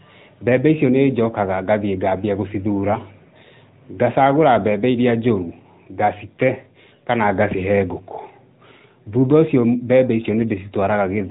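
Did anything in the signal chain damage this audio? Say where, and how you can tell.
Yes, at the codec stage: an AMR narrowband mobile codec damages the speech throughout. On a spectrogram everything stops at a hard 4 kHz ceiling. The voice sounds plainly buzzy and synthetic, which fits a mid-rate mode around 10 kbps rebuilding each 20 ms frame from a few pulses.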